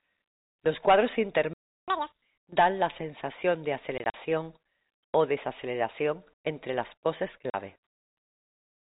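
At 1.53 s the speech cuts out for about 0.34 s, a playback stall. The player was likely starved of data or blocked. Output goes silent mid-flow.

From 1.88 to 2.22 s comes catch-up at higher speed. The backlog plays at double speed, just before "dan la sensación de". Pitch jumps by roughly ten semitones, chipmunk-like.

From 3.98 to 4.14 s, right after "dan la sensación de", there is packet loss filled with silence. About 80 ms goes missing across 160 ms, in holes of up to 40 ms. The gaps have hard edges. It happens again at 7.50 to 7.54 s, after "desaceleración entre las poses": a single 40 ms hole, which fits two lost packets. All of it comes through band-limited G.711 telephone coding, capped at 4 kHz.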